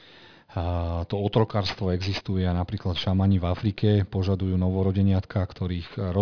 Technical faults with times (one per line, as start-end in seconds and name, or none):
0.00-6.22 aliasing